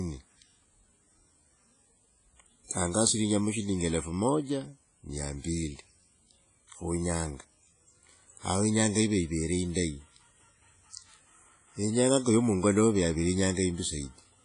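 Speech clip, likely passed through WMA compression at a low bitrate near 24 kbps, so everything above 10.1 kHz is gone and the whole recording rings and washes with signal-following hiss.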